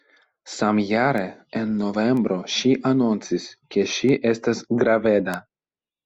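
A speech recording with four bit error spikes, isolated ticks at 1.18, 2.17, 4.09 and 5.34 s. Each is a flipped bit that throws one to three samples off by a power of two before the value snaps back, reaching about −16, −22, −22 and −10 dBFS. On the waveform each shows as a lone needle unrelated to the surrounding speech; on a spectrogram, as a thin vertical line running across the full frequency range.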